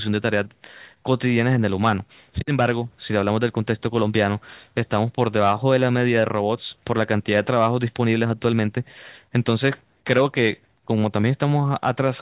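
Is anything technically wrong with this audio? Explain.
No, nothing technically wrong is audible in this speech recording.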